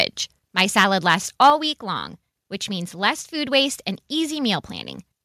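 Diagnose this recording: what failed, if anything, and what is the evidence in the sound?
Microphone overload at 0.58 to 0.84 s, 1.10 to 1.15 s and 1.42 to 1.50 s, at the analogue input and converter stage. The loudest syllables of the speech have a harsh, crackling edge, with peaks driven about 6 dB past full scale in the first burst and about 3 dB in the other two. Only a small share of samples is flattened, though the share grows noticeably in the last burst. The likely cause is microphone input gain set too high, so the signal's tops are cut off at the converter's limit.

Microphone volume stepped down at 1.5 s, in the call processing stage. Speech and background noise drop together by about 5 dB in a single step, landing right at the end of the third clipped burst. Because everything falls at once, the change comes from the input's gain rather than from the talker. The likely mechanism is the call software detecting the repeated clipping and lowering the device's input volume in one step to stop further overload.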